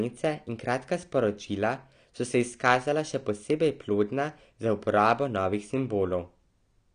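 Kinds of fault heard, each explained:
AAC compression: The speech stops dead at about 9.9 kHz throughout and carries plainly audible coding damage, which fits an AAC-LC encode near 32 kbps. Unlike a simple low-pass filter, the loss comes with smearing and textural artefacts, not just dullness, so lossy coding is the likely cause.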